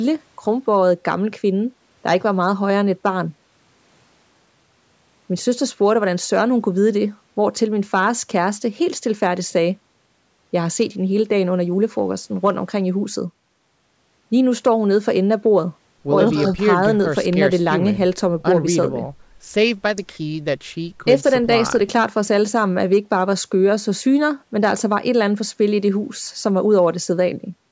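No technical faults occur at any point in the recording, so there is nothing to describe in time order.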